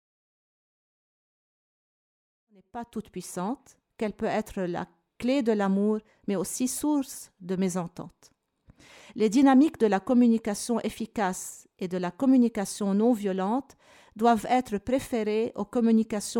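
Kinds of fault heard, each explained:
No faults heard.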